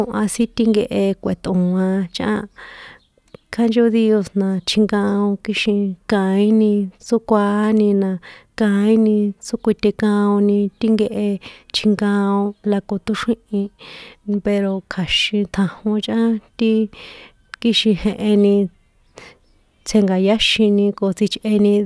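No technical faults can be heard anywhere in the speech.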